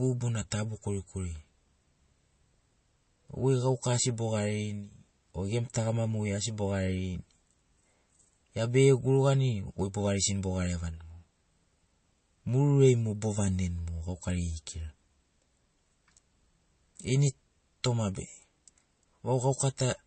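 A speech recording with plainly audible codec damage from start to finish. Nothing is present above 8.3 kHz, so the top of the spectrum is sliced off cleanly. The texture is watery and unstable, as weak frequency components drop in and out between frames. The likely cause is MP3 compression at a low bitrate, which fits something around 33 kbps. Starved of bits, the encoder sacrifices the treble and the quieter detail.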